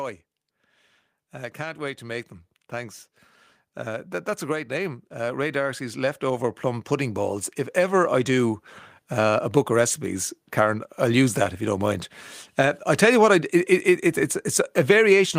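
From 3.85 s to 8.67 s the speech and the room sound behind it swell together, climbing about 10 dB over nearly five seconds. This is automatic gain rising: the gain control judged the input too quiet and slowly turned its gain up.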